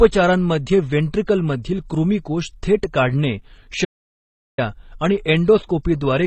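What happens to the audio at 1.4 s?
At 1.4 s the speech carries the layered, smeared artefacts of transcoding between lossy codecs, present across the whole clip. The combined artefacts, with nothing above 8.9 kHz, point to a low-bitrate MP3 likely re-encoded as HE-AAC. On a spectrogram there is a flat ceiling at 8.9 kHz, patchy upper bands and blurred transients.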